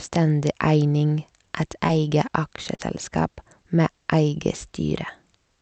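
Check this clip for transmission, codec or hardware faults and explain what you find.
Two brief dropouts in the transmission show up as short concealed packet loss, heard through the call path's Opus coding, which caps the audio at about 8 kHz.

At 1.87–1.91 s and again at 2.75–2.81 s, roughly 20 ms and then 40 ms of audio arrived too late to decode. The receiver bridged each gap by extending the preceding sound, producing a short smear or wobble before the real signal resumes.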